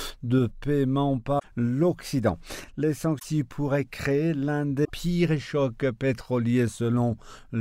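Three short bursts of damaged data in a compressed stream show up, at 1.36 to 1.45 s, 3.16 to 3.25 s and 4.81 to 4.90 s. Each is a brief blip, about 90 ms, where the decoder hits corrupted frames, loses sync and hunts for the next valid header.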